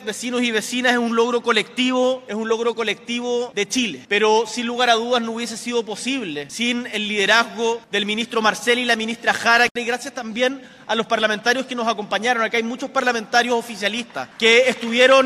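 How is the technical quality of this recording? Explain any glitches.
Listening through the recording, nothing stood out as a technical problem or glitch.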